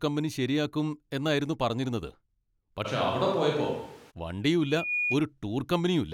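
From 2.87 to 4.09 s the speech turns roomy and hollow, losing bass at about the same level, with room noise around 30 dB below it. The likely cause is a switch to a distant microphone. A spectrogram shows thinner lows and smeared, reverberant word edges.

At 4.61 s a loudspeaker feedback squeal begins: a single 2.4 kHz tone swells over roughly a third of a second to about the speech level and stops at 5.21 s. It appears as a bright horizontal line on a spectrogram and a swelling envelope in the waveform.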